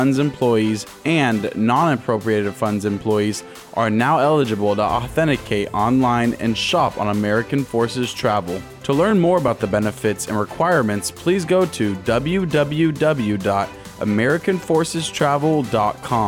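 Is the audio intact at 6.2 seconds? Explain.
Yes, the audio is intact at 6.2 seconds, with no dropout, click, distortion or other fault heard at that point.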